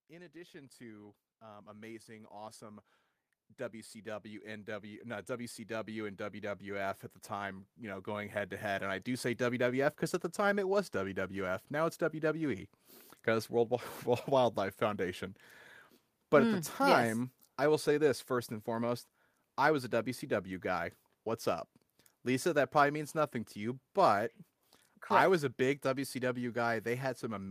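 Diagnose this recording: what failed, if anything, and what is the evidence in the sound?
The automatic gain control in the call processing stage misbehaved: automatic gain rising runs from 0.07 s to 11.57 s, lifting level by about 20 dB. Speech and background noise swell together gradually, showing the gain stage judged the input too quiet and kept boosting it.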